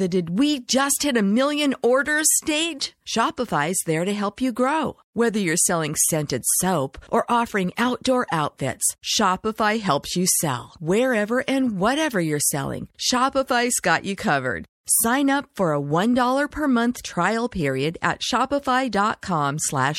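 From start to finish the speech carries plainly audible codec damage, most likely MP3 compression. The quieter detail has a watery, swirly quality as faint parts of the spectrum drop in and out from one frame to the next. S sounds pick up a metallic chirp, and sharp onsets smear. That much damage fits a low bitrate, somewhere around 64 kbps, where the encoder simply runs short of bits.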